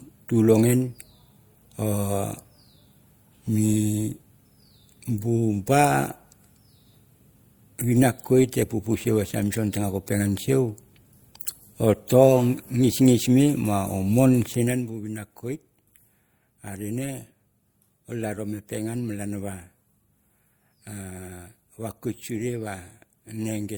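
Across the whole clip the speech carries the mixed artefacts of transcoding between lossy codecs, likely an MP3 encode at around 96 kbit/s later re-encoded to Opus at around 48 kbit/s. The second encoder spends bits on the first one's artefacts and adds its own, so both kinds of damage are heard together. The band stops at 20.3 kHz.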